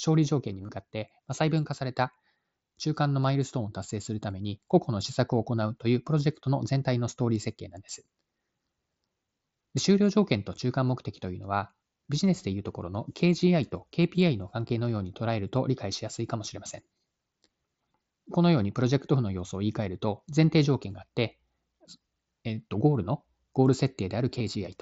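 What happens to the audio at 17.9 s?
Nothing goes wrong at 17.9 s: the speech carries straight through that moment with no break, click, dropout or distortion.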